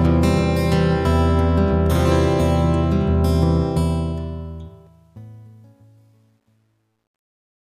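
From 3.66 s to the end the fade-out has truncation distortion: the quieter it gets, the grittier it sounds, worst from about 5.36 to 7.63 s. The fade stage kept too few bits without dither, consistent with roughly 11-bit resolution, so the low-level waveform collapses into coarse steps.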